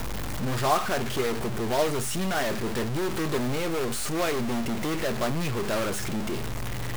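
From start to finish the speech carries a harsh, buzzy grit, and the pauses are filled with a steady noise floor rather than silence. This points to a stuck bit, with one data bit likely held fixed by a faulty line or converter, so about half the samples are offset by a step of roughly -25 dBFS. Unlike clipping, the distortion does not depend on loudness, and the pauses stay noisy even between phrases.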